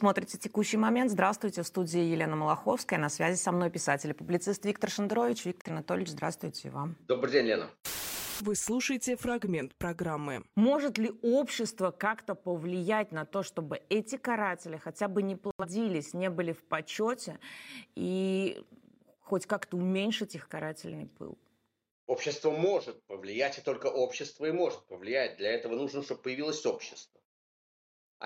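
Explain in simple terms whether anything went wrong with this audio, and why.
A digital broadcast dropout happened twice: the receiver briefly lost good data and muted until it recovered. You hear the sound vanish into short silent gaps, at 5.61 to 5.70 seconds and 15.51 to 15.65 seconds, and whatever was sent then is gone.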